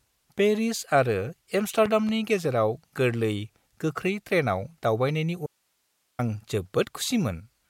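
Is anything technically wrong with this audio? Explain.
Yes, there are two faults in this speech clip.

Between 1.86 and 2.11 s there is a loud pop, heard as two sharp clicks in quick succession just before "गेजेराव गोरलै गोख्रै ट्रेनआव", peaking about 10 dB above the speech, which continues underneath. A sudden voltage step or pulse, likely from a switch, plug or static discharge, was added to the signal. On a waveform it shows as two tall spikes standing clear of the speech. On a spectrogram it appears as two thin vertical lines spanning nearly all frequencies.

From 5.46 to 6.19 s there is an audio dropout to a faint residue. The speech cuts off abruptly for about 0.72 s, leaving only hiss about 50 dB below normal level, and then snaps back mid-flow. This is likely a break in the signal path ahead of a stage that stayed live and kept passing its own noise. On a waveform the trace collapses to a near-flat line with hard edges. 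A spectrogram shows a dark block with only a faint, even noise haze.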